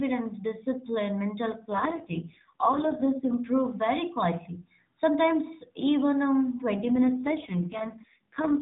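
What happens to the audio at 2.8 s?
That's an AMR rate drop, from about 1.70 to 3.36 s, after "discipline mental" and before "very quietly". The speech turns rougher and more synthetic, which fits the codec stepping down from 12.2 to 4.75 kbps over a weak link.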